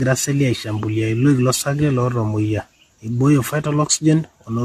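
Throughout, the speech sounds swirly, smeared and hollow, with blurred attacks and nothing above 14.1 kHz. This is likely generation loss, fitting roughly ten passes through 64 kbit/s AAC-LC.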